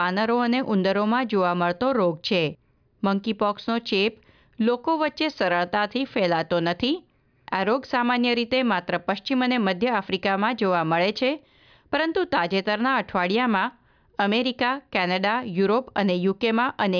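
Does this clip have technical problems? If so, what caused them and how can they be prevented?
No, there are no technical problems to point to in this speech recording. With nothing having gone wrong, there is no cause to trace and nothing to prevent.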